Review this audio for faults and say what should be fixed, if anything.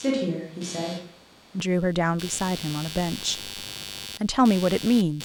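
Computer activity noise runs through the whole recording: a buzzing, chirping layer pulsing at around 100 times per second, roughly 15 dB below the speech. Load changes in the computer are disturbing the audio ground, so the noise follows the machine's activity rather than the speech. Prevent it by isolating the interface's ground or using an external, separately powered audio interface.

From the start to 1.60 s the speech sounds roomy and hollow with thinner bass, then turns close and direct. The level hardly changes, but room noise sits roughly 25 dB below the speech. This is likely a switch to a distant microphone while the close one was missing. Prevent it by confirming the close microphone is live and selected before recording begins.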